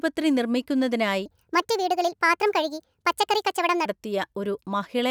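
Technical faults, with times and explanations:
1.26–3.85 s, section at the wrong speed: For about 2.6 seconds the speech jumps to 1.45 times its normal rate. Pitch and pace rise together, about seven semitones higher, so the talker sounds high and hurried. Speed and pitch switch abruptly at both edges, then return to normal. Because they move as one, this is not pitch shifting. The section was likely played against the wrong clock during editing or playback.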